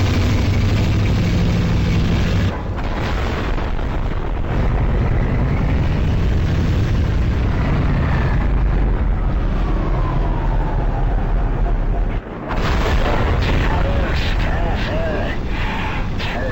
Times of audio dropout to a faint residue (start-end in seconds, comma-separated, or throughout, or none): none